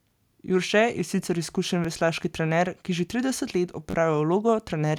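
At 1.85 s, just after "sicer izkušen", a repeated buffer is heard: one slice of about 10.7 ms, which fits a 512-sample buffer, plays a second time because fresh audio arrived late, giving a single hard join. At 3.90 to 3.94 s, after "ki že trideset let", one slice sounds three extra times, a short stutter. Unlike a dropout, nothing goes silent and no audio is lost; identical material simply repeats.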